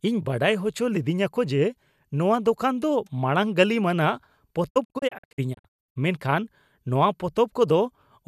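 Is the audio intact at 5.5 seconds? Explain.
No. From 4.69 to 5.97 s the speech breaks into brief silent holes, about 600 ms lost: a digital broadcast dropout, with the receiver muting corrupted frames.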